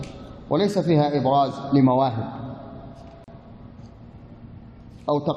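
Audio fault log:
3.24 to 3.28 s, gap at a join of encoded pieces: the audio was encoded as separate pieces and spliced back together without trimming, so the encoder's start-up delay and the padding on the last frame of the earlier piece both remained at the seam. That leaves a silence of about 37 ms cut into otherwise continuous sound, with smeared edges, after which the sound resumes exactly where it broke off.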